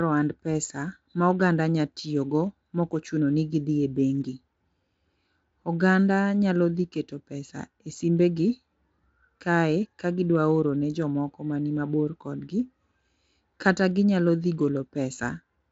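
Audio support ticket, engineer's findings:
No faults found; speech runs through Speex at what sounds like a high quality setting, band ending near 7.7 kHz, coding damage faint at most.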